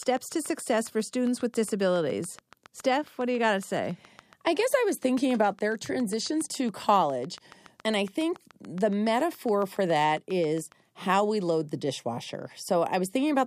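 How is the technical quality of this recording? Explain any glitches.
The recording is marred by one clear fault. From 0.03 s to 10.73 s there is a train of clicks: about seventy pulses at a steady 7.2 per second, roughly as loud as the speech, likely from nearby equipment interference or a faulty connection. It ticks through pauses too, showing as evenly spaced vertical lines on a spectrogram and sharp spikes on the waveform.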